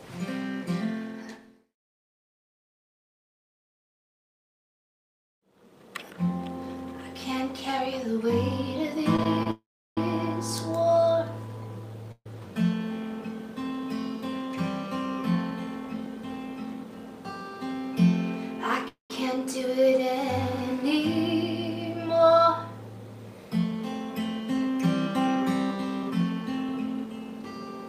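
Between 9.16 and 9.47 s there are repeated stalls (stutter): three brief gaps, the longest 27 ms, filled by stretching the preceding sound, so about a fifth of that stretch drags and catches. Unlike dropouts, nothing is lost, and the flow simply hesitates.

A call audio freeze follows at 9.51 to 9.98 s, with 460 ms inserted, of which 340 ms has faded to silence. Shorter freezes occur at 12.12 to 12.26 s (138 ms, 40 ms silent) and 18.88 to 19.11 s (218 ms, 120 ms silent). Each was likely caused by packets held up until the jitter buffer ran empty. The last sound smears into a fading buzz, then resumes exactly where it stopped. The single long hold separates these from the stutter's rapid catches.

From 20.99 to 27.43 s, a jitter buffer speed-up runs the audio at 104% speed, trimming roughly a fifth of a second overall. The pitch stays unchanged, which distinguishes this from a sample-rate error. 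The result is slightly faster rather than higher.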